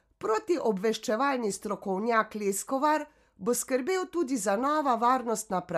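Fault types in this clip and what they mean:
No technical faults can be heard in this recording.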